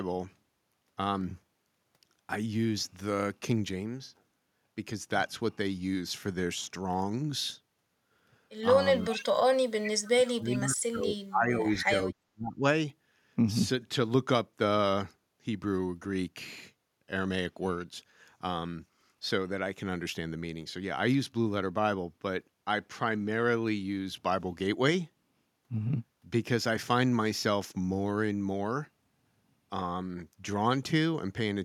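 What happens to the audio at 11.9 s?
At 11.9 s the speech is turned down, near the end of a dip from 10.12 to 12.14 s that bottoms out around 35 dB. This is speech suppressed in double talk: both sides likely spoke at once, and the echo canceller turned this talker down along with the echo.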